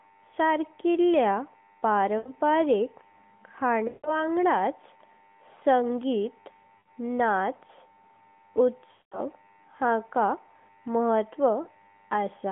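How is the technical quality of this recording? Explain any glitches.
The recording has five dropouts from lost AMR speech frames, heard through a narrowband AMR phone channel with nothing above about 3.4 kHz.

Lost AMR speech frames at 2.18–2.32, 3.88–4.25, 6.78–6.90, 8.92–9.21 and 11.62–11.68 s (roughly 40 to 200 ms each). The decoder repeats the last good frame's settings with falling gain, so the sound stretches, warbles and fades.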